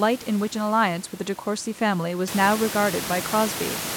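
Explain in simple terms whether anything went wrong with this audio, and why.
Nothing went wrong in how this speech was captured or played back; the background noise of the room sits well beneath the talking and grows noticeably louder from about two and a half seconds in, but that comes from the room itself, not from any equipment problem.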